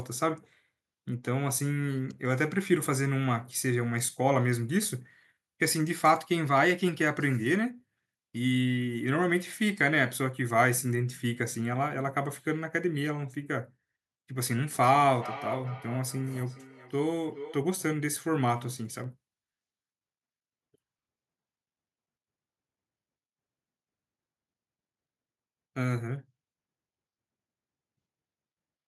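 A speech recording with three kinds of technical fault. At 1.09 s a bit error spike produces one sharp tick: a single sample jumps off the waveform and snaps straight back, a lone needle in the waveform and a full-height stripe on the spectrogram, unrelated to the speech around it. At 6.88, 18.14 and 19.04 s there are separate clicks, each a thin vertical line across the spectrum with a small step in the waveform. These are likely dropped samples, where a fraction of a millisecond goes missing and the waveform lurches ahead without any audible gap. From 14.7 to 17.67 s a feedback echo between two devices appears. A second device in the room replays this microphone's signal, which is picked up again, so each word returns roughly every 0.4 s, thinner and more ringing each time, peaking about 13 dB below the speech. On a spectrogram this shows as faded copies of each syllable repeating at that fixed spacing.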